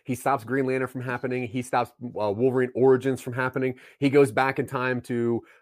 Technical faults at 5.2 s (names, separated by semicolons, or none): none